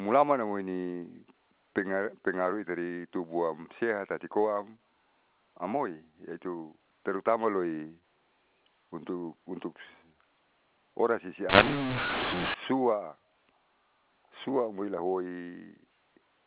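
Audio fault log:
11.49–12.54 s, mu-law and A-law mixed up: for about a second the speech, carried over G.711 telephone coding that is band-limited to 4 kHz, turns harsh and gritty because A-law coded bytes are being expanded with the mu-law curve. Each sample's level is mapped wrongly, some too loud and others too soft, and near-silent samples jump well above zero, so gaps hiss. On a waveform the envelope looks jagged and uneven. On a spectrogram a broadband noise floor fills the segment, including pauses, up to 4 kHz.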